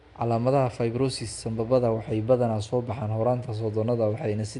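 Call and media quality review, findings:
Rough, hissy halo and smeared, underwater quality on the speech, whole clip; no content above about 10.6 kHz. Likely Nellymoser compression: fixed two-bit-per-sample block coding, with starved bands replaced by noise fill, damage plainly audible.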